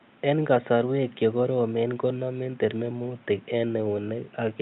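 Nothing is technically wrong with this recording of speech. A faint room noise sits about 32 dB below the speech, and the call codec path leaves the top end rolling off around 12 kHz.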